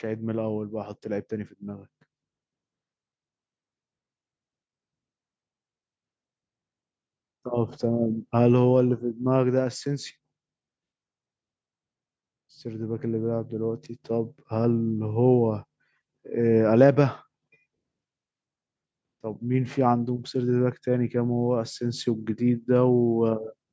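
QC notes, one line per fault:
0.05 to 1.91 s, automatic gain rising: right at the start the level climbs by about 5 dB over nearly two seconds, and the speech and the room noise swell up together. That's the automatic gain control deciding the input was too quiet and easing its gain up rather than jumping, so you hear a slow ramp instead of a step. The call's mic processing is audible too, with nothing above 8 kHz, but that part's expected.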